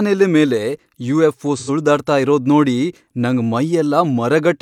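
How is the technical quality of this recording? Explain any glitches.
One glitch stands out in the speech. AAC frame loss with concealment, 1.56 to 1.70 s: roughly 85 ms went missing, consistent with two lost frames, and the decoder rebuilt it from the preceding spectrum, leaving a brief smeared, noisy patch.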